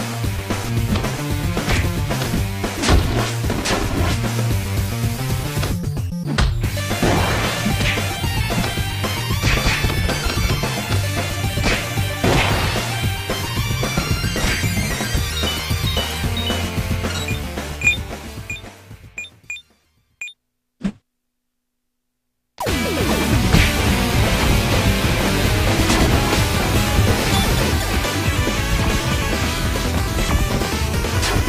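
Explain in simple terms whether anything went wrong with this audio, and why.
Nothing went wrong here.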